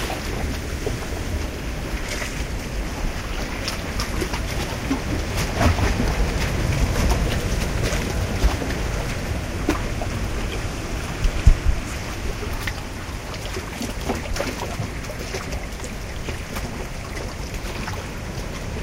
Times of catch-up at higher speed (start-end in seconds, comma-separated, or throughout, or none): none